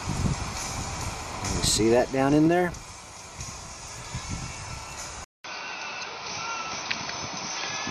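An input switched to a poorer device at 5.24 s, with a gap of about 200 ms at the switch, and the sound stays altered to the end. The likely cause is the recording moving to a different microphone or headset profile mid-take. Afterwards nothing reaches above 6.2 kHz, so the top end goes dull and boxy, and a new noise floor appears roughly 40 dB under the signal, while the overall level stays about the same.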